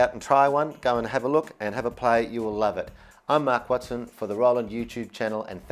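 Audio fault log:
No faults were found in this audio. Nothing in it calls for an entry in the log.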